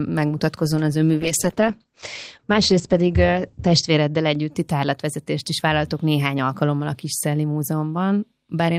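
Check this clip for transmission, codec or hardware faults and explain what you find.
A call bitrate drop runs from 1.27 s to 4.57 s. The link's bandwidth estimate fell, so the encoder was told to spend far fewer bits, a fall consistent with going from around 64 kbps to about 10 kbps, held at its lowest for 2.58 s. Coding became coarse and the audio bandwidth shrank from 20 kHz to 8 kHz. The speech turns muffled and rough, with a watery texture, until quality recovers at 4.57 s.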